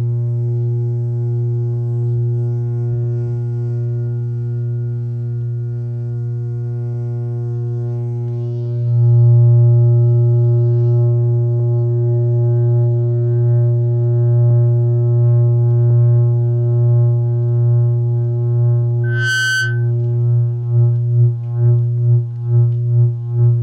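At about 19.03 s a loudspeaker feedback squeal kicks in and runs to roughly 19.91 s. A microphone is picking up the speaker it's feeding, and at 1.5 kHz the loop gain tips past one, so that frequency keeps feeding on itself. You hear a single piercing tone swell up over something like a third of a second until it's about as loud as the rest of the sound, then it stops.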